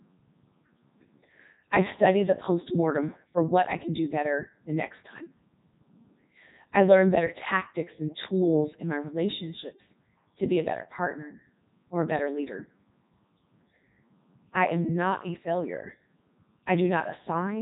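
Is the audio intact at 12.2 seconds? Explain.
No. At 12.2 seconds, as throughout the clip, the speech is running through the Codec 2 vocoder, and the damage is heavy. The decoder rebuilds the voice from sine waves driven by pitch, voicing, energy and a rough spectral envelope, so the original waveform is gone. That's why it sounds robotic and buzzy, with nothing above 3.8 kHz. The harshness fits the 3.2 kbit/s mode.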